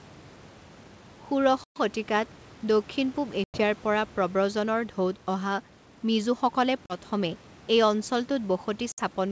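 At 1.64, 3.44, 6.86 and 8.92 s, speech drops into hard-edged silence. This is packet loss on an ADPCM call: about 120, 100, 40 and 60 ms go missing, a few packets each. The decoder's predictor then mistracks, so speech returns slightly distorted before settling.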